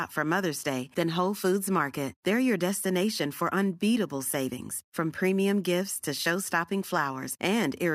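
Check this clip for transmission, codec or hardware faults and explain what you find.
Nothing stood out on listening to this speech recording that would point to a problem in how it was transmitted, encoded or captured.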